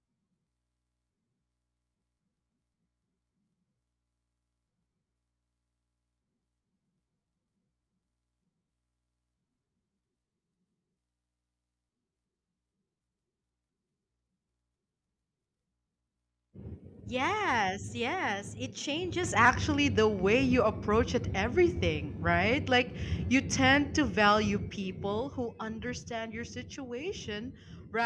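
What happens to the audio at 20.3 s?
At 20.3 s you're inside a wrong sample rate stretch that runs from about 19.45 s to the end at 28.05 s. The speech plays back at roughly 0.92 times its proper speed and drops about 1.5 semitones, so it sounds a touch slow and low. That fits 24 kHz material being played at 22 kHz without any conversion.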